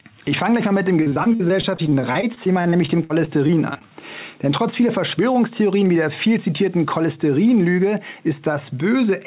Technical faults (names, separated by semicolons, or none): repeated packet loss (robotic sound); jitter buffer speed-up